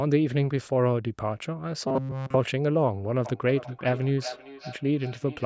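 Robotic sound from repeated short buffers runs from 1.88 to 2.36 s. The speech collapses into a rigid, metallic buzz fixed at 133 Hz that only loosely follows the words. The likely cause is audio arriving too slowly, so the playback side kept looping the last fragment, which fits a buffer of roughly 7.5 ms, while the real audio was skipped. Essentially the whole stretch is repetition.

Feedback echo between two devices begins at 3.25 s and continues to the end. Each phrase returns about 0.4 s later, at about 15 dB below the direct speech, thinner and more ringing than the original. A second device in the same room is playing the call back into this microphone, and neither echo canceller removes sound from the other device, so the repeats circle around the loop.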